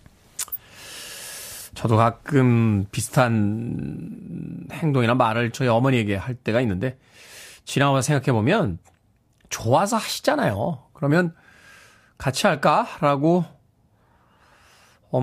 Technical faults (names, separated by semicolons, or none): corrupt frame decoded